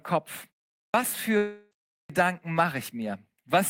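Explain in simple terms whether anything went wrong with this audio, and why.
At 0.86 s and again at 2.01 s, the speech jumps in abruptly after a short silence, with its opening sounds missing, about 80 ms the first time and 90 ms the second. This is a clipped start after a pause. The playback device dozed off during the preceding quiet stretches (about 0.42 s and 0.51 s) and was slow to wake.

From 1.37 to 1.73 s, roughly a third of a second of speech is replaced by a smeared, fading buzz, and the speech then resumes further on with that piece gone. This is most likely a long network dropout: the audio never arrived, so the player stretched the last sound to cover the gap.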